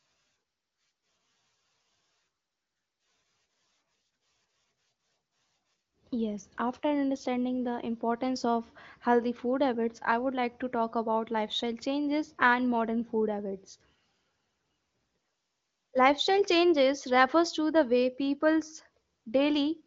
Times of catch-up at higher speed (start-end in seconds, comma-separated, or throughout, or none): none